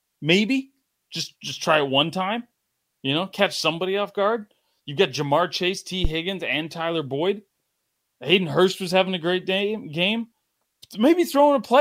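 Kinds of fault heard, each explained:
Phantom power thump: A supply was switched on or off on a live input. The sudden voltage step passed through the coupling capacitors into the signal path. The result is a deep, low thump in the speech between 6.05 and 6.12 s. It peaks at about -7 dBFS. The thump dies away quickly, with a decay of 16 ms. The impact is short and blunt, with no lingering rumble.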